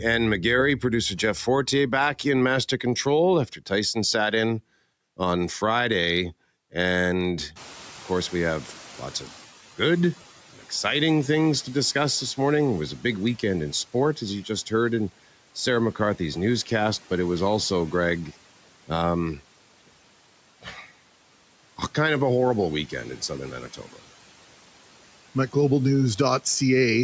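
From 7.55 s to 10.31 s, background noise surges in behind the speech, then sinks by about 9 dB. This is the noise suppressor catching up: room noise jumped about 23 dB around 7.5 s, and its estimate took 2.76 s to follow.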